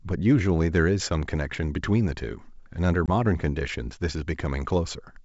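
A speech clip on a G.722 wideband call has packet loss from 3.06 to 3.10 s: a hard-edged silent hole, about one packet, after which the ADPCM decoder's mistracked predictor briefly disturbs clarity, unlike a clean dropout.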